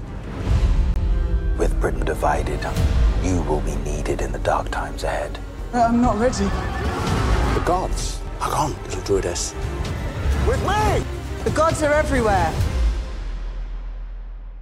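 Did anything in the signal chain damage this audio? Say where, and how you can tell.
Yes. A block of digital silence sits at the driver or buffer stage. From 0.94 to 0.96 s the sound drops to silence for 20 ms. It cuts out and back with no fade. That points to an output buffer left unfilled in time.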